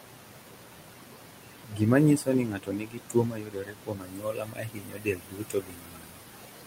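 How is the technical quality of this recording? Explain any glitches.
The technical quality is poor: a noise suppressor is working too hard on this speech, leaving artifacts throughout and cutting the speech itself in two places.

Noise suppressor artifacts run through the whole clip. The suppressor judges, frame by frame, which frequency bands hold steady noise and turns them down by about 18 dB. The room noise, which sits about 11 dB below the speech, therefore dips in the gaps and swells back under the talking.

Speech cut by the noise suppressor happens first from 1.64 to 1.82 s, a drop of about 17 dB, and then across a long stretch from 2.17 to 6.24 s, reaching about 19 dB. In both places the suppressor mistook parts of the speech for background noise and pulled them down along with it. The first affects roughly a fifth of a second and the second roughly four seconds, leaving soft consonants and word endings swallowed and quieter passages faint.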